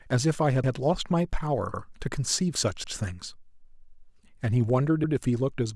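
A speech clip with overlapping chunks: the audio was handled in 1.0 s blocks, and each block began 100 ms before the previous one ended, so that slice of sound plays twice at the join. The result is a brief stutter, a jolt where the same fragment repeats, at 0.64 s, 1.74 s, 2.84 s and 5.04 s, each lasting about 0.1 s and recurring at the steady spacing of the chunk boundaries.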